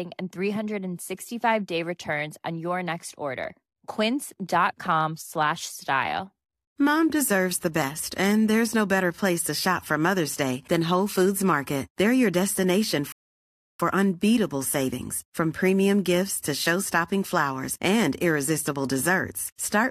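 A rebuffering stall runs from 13.12 to 13.80 s: after "your destination" the player exhausts its downloaded audio and falls silent for about 0.67 s, then picks up with "unbeatable savings from premium" exactly where it stopped, losing nothing but adding a gap.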